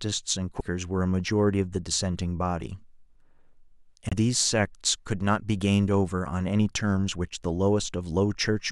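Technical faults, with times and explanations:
0.59–0.62 s and 4.09–4.13 s, broken MP3 bit reservoir: the speech skips forward with a brief garbled glitch of about 30 and 40 ms. Frames were likely dropped, so the next frames looked back into the reservoir and decoded another frame's bytes. Each glitch spans under two frames of about 26 ms.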